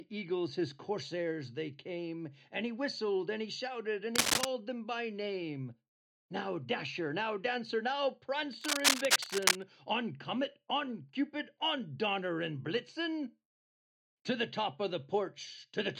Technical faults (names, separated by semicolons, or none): cable scratch noise